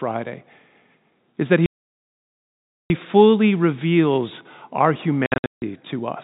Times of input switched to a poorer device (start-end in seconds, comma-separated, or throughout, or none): none